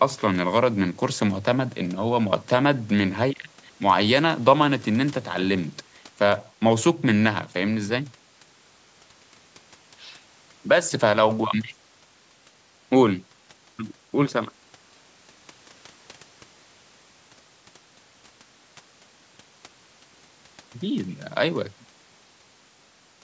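No technical faults can be heard in the speech. The call microphone processing is working as expected, with the lowest bass trimmed away and nothing above 8 kHz.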